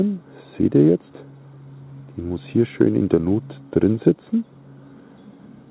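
Nothing here needs flagging; the audio just has the narrow telephone-band sound of a normal call path, with nothing above 4 kHz, which fits a G.711 A-law link running as designed.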